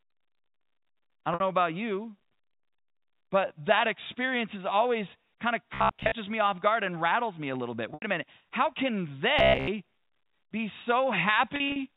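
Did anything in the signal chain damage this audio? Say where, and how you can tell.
Yes, at the network stage: packet loss with pitch repetition at 1.34 s (60 ms lost), 7.94 s (80 ms), and 11.56 to 11.76 s, where about 100 ms goes missing in scattered bursts over 200 ms, the longest 40 ms. Each gap is papered over by looping the last pitch period, so you get a brief held, buzzy tone before the speech picks back up.

From 5.74 to 6.13 s and again from 9.39 to 9.69 s the speech goes metallic, with a rigid 66.7 Hz buzz riding on it. That's robotic sound from repeated short buffers. The pitch fits a 15 ms chunk being replayed while most of the real audio gets skipped, likely a buffer or driver starved of incoming data.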